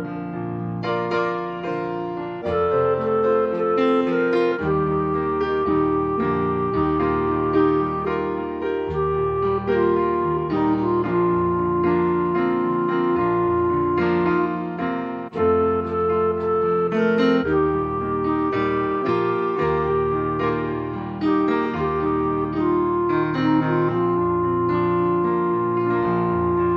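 Throughout the clip, likely MP3 compression at a low bitrate, consistent with about 64 kbps, leaves the encoder short of bits, so weak frequency components drop in and out between frames. The result is plainly audible watery, swirling artefacts, with transients smeared.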